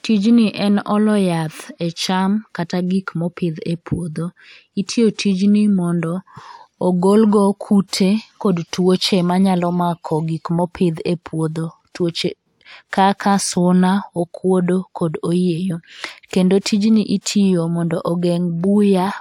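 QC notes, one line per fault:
No faults found in this clip.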